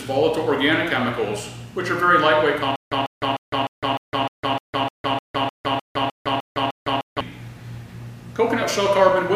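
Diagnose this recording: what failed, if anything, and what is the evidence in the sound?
Stutter with silent gaps from 2.76 to 7.21 s, at playback, likely a stalled stream: one 146 ms burst repeats 14 times every 304 ms, with 157 ms of digital silence between. The waveform shows identical blocks between flat zero lines; the spectrogram shows repeated slabs and empty columns.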